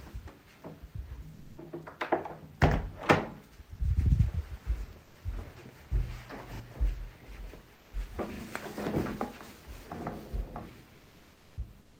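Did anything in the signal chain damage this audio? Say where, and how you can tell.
Yes. At 1.33 to 1.57 s, 7.75 to 7.93 s and from 11.83 s to the end, the real background gives way to a flat, featureless hiss, about 5 dB louder in the first gap and about 2 dB quieter in the others. This is comfort noise in place of the background, likely from Opus discontinuous transmission in the codec, with the receiver synthesising noise while the sender paused.

At 6.56 s and again at 8.36 s, a 40 ms slice plays twice with a hard join, heard as a brief stutter. This is a repeated buffer at the driver or buffer stage: fresh audio arrived late, so the previous 40 ms block was replayed.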